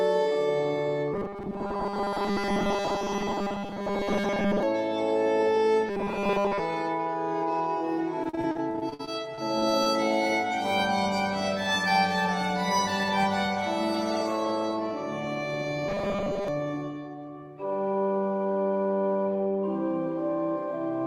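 From 1.14 to 4.63 s, and again from 5.89 to 6.60 s and from 15.88 to 16.48 s, the sound takes on a rigid, metallic buzz fixed at 200 Hz. That is robotic sound from repeated short buffers, likely caused by new audio arriving too slowly, so very short slices are replayed in place of most of the real signal. A 200 Hz buzz fits a loop of about 5 ms. The buzz holds a steady pitch, and the sound's contour shows through only roughly.

From 8.23 to 9.87 s the fault is repeated packet loss (robotic sound). Audio keeps dropping out, and each hole is bridged by extending what came just before. About 280 ms of audio is lost and about 400 ms is filled in, roughly a quarter of the stretch. The longest single gap is 52 ms. Unlike the steady buzz in the other passages, this one sounds choppy and uneven, with pieces missing.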